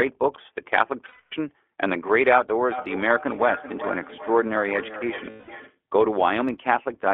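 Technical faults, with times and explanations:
Throughout, iLBC codec: the speech has passed through a narrowband VoIP codec at 15.2 kbps that codes each 20 ms frame on its own, and the line keeps only about 300 Hz to 3.4 kHz. Everything above that is gone, so the voice sounds boxed-in and thin, and the coding damage is plainly audible as a rough, slightly synthetic grain on every syllable, with the sibilants dulled.
1.08 to 1.33 s and 5.30 to 5.49 s, lost iLBC frames: packets went missing for 240 ms and then 180 ms, and the decoder filled each hole by repeating the last pitch cycle with noise mixed in, fading as the gap went on. Each dropout sounds like a held, faintly buzzy vowel that sags away. Since iLBC frames don't depend on earlier ones, the voice snaps back cleanly as soon as real frames return.
2.72 to 5.81 s, feedback echo between two devices: a second device in the same room is on the call and replays the audio, which its neighbour's microphone picks up and sends round again. 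Neither echo canceller can remove sound played by the other device. Each phrase returns roughly 0.4 s later, at most about 13 dB below the direct speech, thinner and more ringing with each pass.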